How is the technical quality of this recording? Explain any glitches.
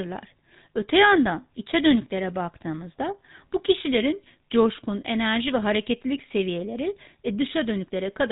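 The speech is buzzy and gravelly throughout, with a boxed-in, muffled top end, the plainly audible signature of the GSM full-rate codec, at a rate that fits 13 kbit/s. The codec models the vocal tract as a filter and drives it with a sparse train of regularly spaced pulses, keeping only every third excitation sample, so the fine texture of the voice becomes a rough buzz. Nothing above about 3.8 kHz survives, which removes the air and crispness from consonants.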